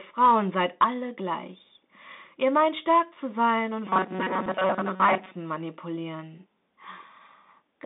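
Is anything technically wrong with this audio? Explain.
Yes. Three faults can be heard in this speech.

The Bluetooth CVSD headset codec colours the whole clip. The speech is squeezed into a band of roughly 200 Hz to 3.7 kHz, so nothing bright survives above it. CVSD codes each sample as a single up-or-down step whose size adapts. Fast, loud high sounds outrun that step and distort. The sibilants turn scratchy, and a grainy hiss sits under the voice. The damage is plainly audible and fits a 64 kbps link.

From 3.85 to 5.32 s the speech turns robotic, most likely from repeated short buffers. New audio arrives too rarely. The gap is filled by replaying the last few milliseconds, while fresh audio is dropped. Most of the sound in this stretch is repeated material. The loop forces a fixed 188 Hz buzz onto the voice, which fits a buffer of about 5.3 ms. The result is a rigid, metallic drone that loosely tracks the speech.

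At 4.46 s there is unconcealed Bluetooth headset packet loss, inside the robotic stretch. A voice packet between headset and phone went missing. Nothing patched the gap, so silence or an idle pattern filled it. The hole lasts about 3.8 ms, which points to a single lost packet. Its edges are abrupt and can give a small click. On a CVSD link the level then dips briefly before recovering.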